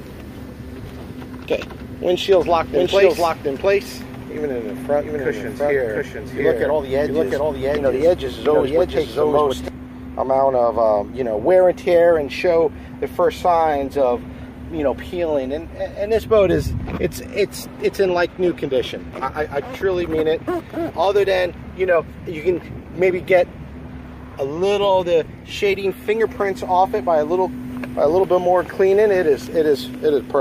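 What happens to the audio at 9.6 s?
Right at 9.6 s you're in the last moment of a doubled audio track, which runs from 2.32 s and cuts out abruptly at 9.68 s. A second full-band copy of the sound trails the original by roughly 0.7 s, at about the same loudness, with no decay or room colour on it. That's most likely the signal being captured again through a slower path, or an edit leaving two copies out of step.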